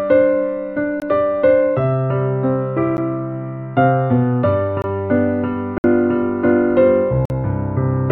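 Blocks of digital silence occur at 1.00–1.02 s, 2.97 s, 4.82–4.84 s, 5.78–5.84 s and 7.25–7.30 s. In each, the output buffer was likely not filled in time and zeros were emitted instead. The sound cuts out and back with no fade, so the 11 ms gap sounds as a tick and the 20, 46 and 60 ms gaps as brief holes.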